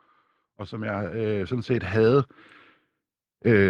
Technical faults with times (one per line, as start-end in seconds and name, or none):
0.44-2.39 automatic gain rising